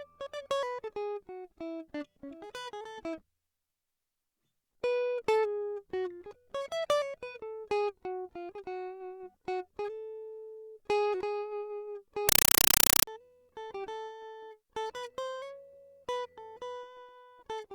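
At 12.29 s the music drops out and a harsh, very loud chattering static takes over until 13.07 s. It's a compressed stream played as audio. An AC-3 (Dolby Digital) stream, which fits something around 256 kbps, got passed through as plain PCM instead of being decoded. Each frame shows up as a roughly 5.33 ms noise burst followed by silence, repeating at 31.25 Hz, and that's the rattly buzz you hear.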